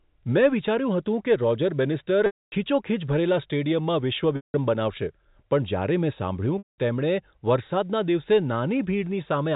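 At 2.26, 4.36 and 6.58 s, packet loss with pitch repetition bridges gaps of 260, 180 and 200 ms (which fits 20 ms packets). Each begins as a held, buzzy tone that fades to silence instead of cutting abruptly, then cross-fades back into the band-limited telephone speech.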